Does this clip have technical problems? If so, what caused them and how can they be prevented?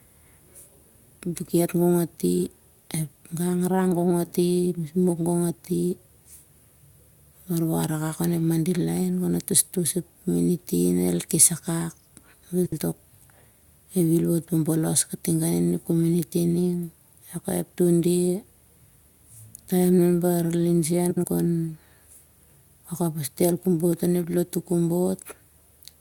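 Yes. Frames out of order: two neighbouring runs of frames were delivered swapped and decoded in that order, at 12.65 to 12.79 s and again at 21.10 to 21.25 s. Each stretch of about 0.14 s plays with its two halves exchanged, consistent with runs of about three frames each. The speech turns into a brief garbled flutter, and no time is lost. Buffering and reordering packets by sequence number before decoding prevents this.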